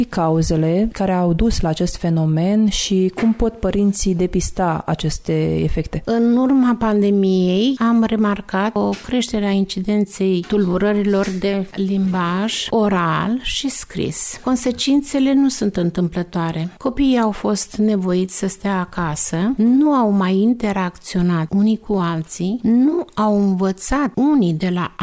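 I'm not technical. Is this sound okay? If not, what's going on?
Yes, no faults turned up anywhere in the recording.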